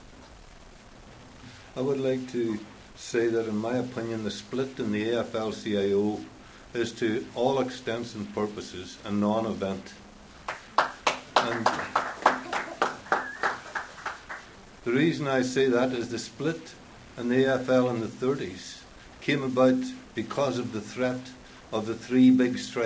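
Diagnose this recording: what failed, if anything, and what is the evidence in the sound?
Nothing failed; no faults found.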